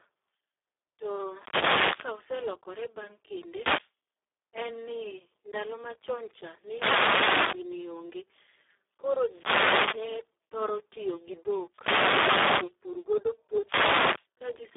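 Throughout, the speech carries heavy Speex codec damage. It sounds hoarse, noisy and close to robotic. That fits a very low Speex bitrate of about 4 kbps, which leaves too few bits for the excitation. The line band runs from 250 Hz to 3.6 kHz. Nothing is heard above 3.7 kHz.

Six wireless microphone noise hits break in. They fall at 1.23 to 2.25 s and 3.52 to 3.91 s. Another runs 6.60 to 7.72 s, just after "ni ndalo machon cha". One runs 9.23 to 10.13 s, ending before "thoro tiyo gi dhok". The next runs 11.71 to 12.76 s, just after "thoro tiyo gi dhok". The last falls at 13.61 to 14.27 s. Each is a swish or burst of static. The radio signal fades and receiver noise rises.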